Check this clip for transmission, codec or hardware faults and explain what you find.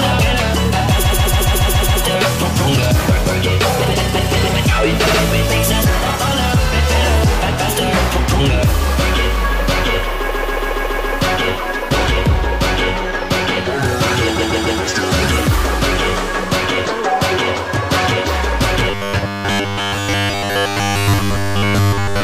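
Two kinds of fault are present: four bursts of repeated frames in the first 15 seconds, and a robotic buzz from repeated short buffers covering the final stretch.

Repeated frames occur at 1.04–2.02 s, 5.06–5.20 s, 10.30–11.13 s and 14.38–14.80 s. A block of compressed audio was delivered more than once, so the decoder replays it. Three bursts loop a 139.3 ms block, which fits a run of about six frames. It plays 7, 6 and 3 extra times, adding 975, 836 and 418 ms. The 5.06 s burst loops a 69.7 ms block twice more, adding 139 ms. Each is heard as a stutter.

Robotic sound from repeated short buffers runs from 18.91 s to the end. Essentially all of this section is a rigid, metallic 100 Hz buzz that still loosely follows the sound's contour. The likely cause is fresh audio arriving too seldom, so the playback software keeps refilling the gap with its most recent 10 ms buffer while the real audio is dropped. 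Repeating a 10 ms chunk imposes a fixed 100 Hz pitch.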